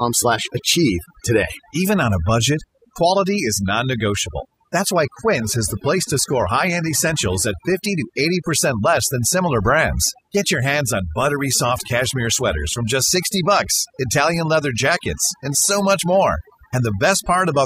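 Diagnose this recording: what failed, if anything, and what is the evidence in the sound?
Overdone noise removal at the call-processing stage, throughout: near-silent background with twinkling specks. A spectrogram shows black gaps, isolated dots and ragged, chopped harmonics.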